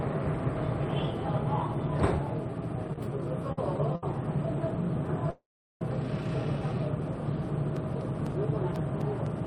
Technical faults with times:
3.52-3.58 short stall from a late packet
3.95-4.03 short stall from a late packet
5.30-5.82 call audio freeze
7.76-9.46 periodic USB or driver dropouts

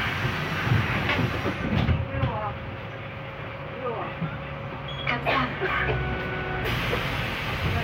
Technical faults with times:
none

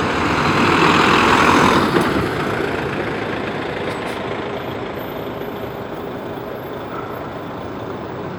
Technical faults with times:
none

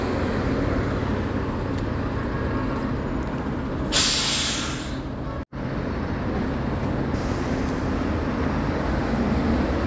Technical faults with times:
none

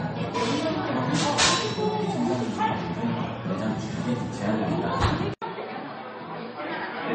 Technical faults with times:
0.00-7.15 transcoding between lossy codecs
5.34-7.15 input switched to a poorer device

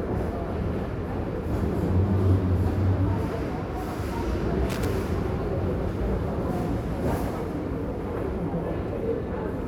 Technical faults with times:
4.70-4.85 loose connector crackle

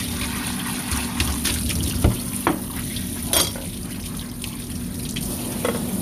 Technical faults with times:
none

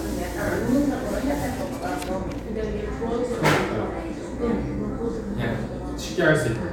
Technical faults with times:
none

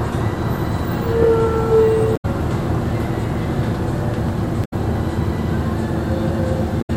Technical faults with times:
2.13-2.25 damaged data in a compressed stream
4.61-4.73 damaged data in a compressed stream
6.78-6.90 damaged data in a compressed stream

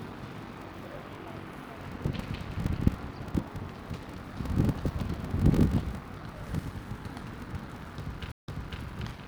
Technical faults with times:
0.00-9.28 block size mismatch (padded)
8.32-8.82 stream reconnect

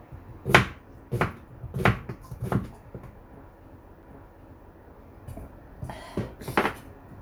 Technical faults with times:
4.02 CD skip

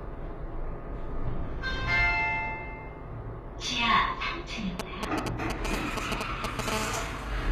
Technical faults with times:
0.00-7.52 HE-AAC compression
4.79-6.70 GSM signalling bursts
6.72-7.47 GSM phone buzz

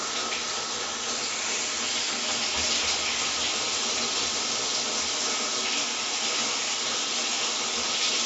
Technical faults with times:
none

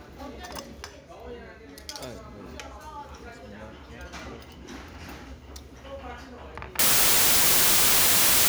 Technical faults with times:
6.79-8.48 wrong sample width

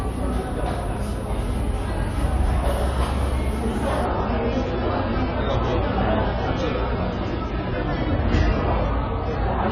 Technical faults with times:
4.05-9.71 adaptive stream at a lower bitrate

